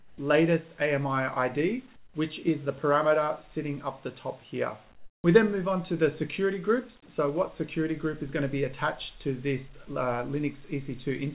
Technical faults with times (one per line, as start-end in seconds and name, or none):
0.00-0.18 comfort noise in place of the background
1.96-2.14 comfort noise in place of the background
4.96-5.24 comfort noise in place of the background